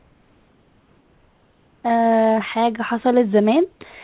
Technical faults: comfort noise in place of the background

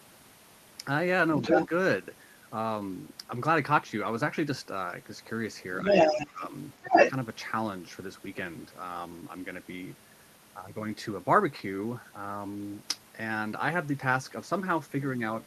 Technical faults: other side's voice leaking through; speech suppressed in double talk

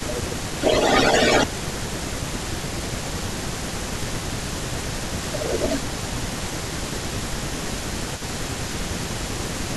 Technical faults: speech suppressed in double talk; echo leak

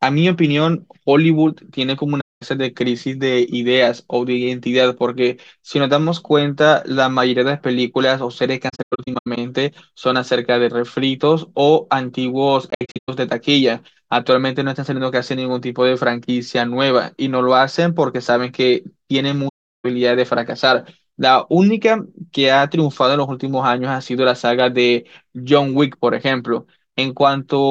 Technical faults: AAC frame loss with muting

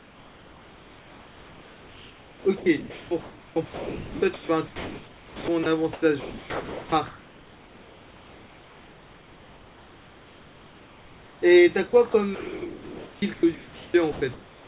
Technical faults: sound chopped by the voice detector; comfort noise in place of the background; sound dropped by the voice detector

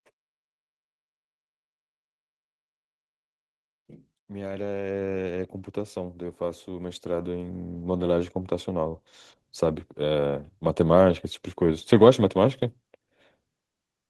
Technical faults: automatic gain rising

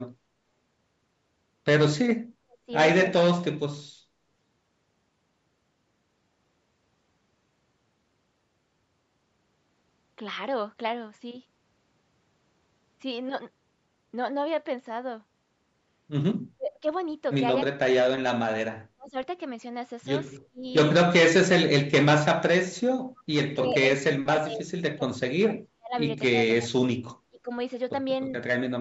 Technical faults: speech suppressed in double talk

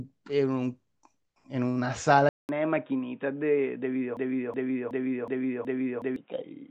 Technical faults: input switched to a poorer device; broken-record loop

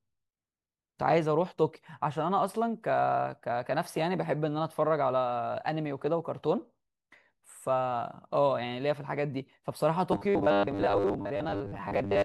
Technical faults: robotic sound from repeated short buffers

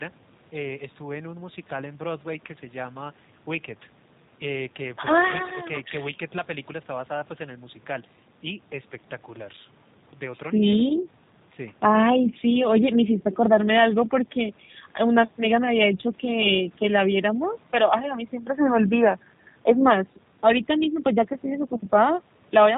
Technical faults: G.729 codec

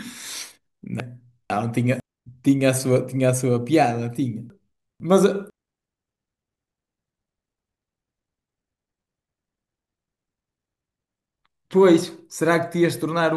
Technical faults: chunks out of order

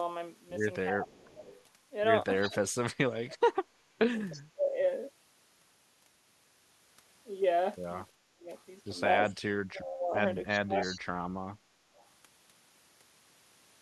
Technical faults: speech suppressed in double talk; echo leak

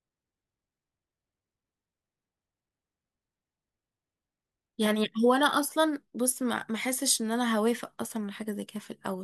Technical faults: none

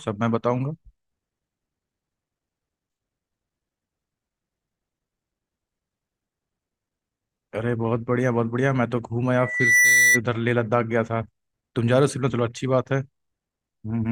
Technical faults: loudspeaker feedback squeal

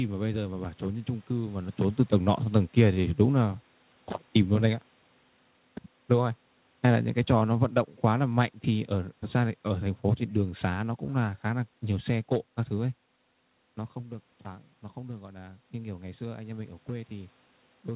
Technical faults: automatic gain falling; automatic gain rising

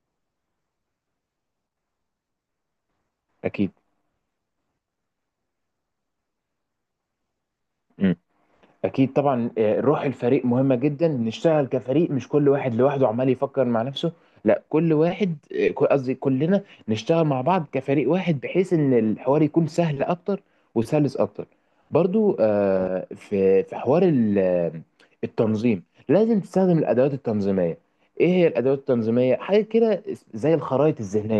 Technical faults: none

